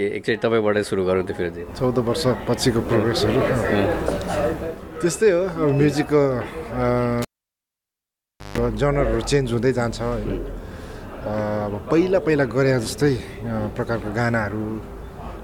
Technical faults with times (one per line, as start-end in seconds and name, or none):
7.22-8.58 cable pulled and plugged in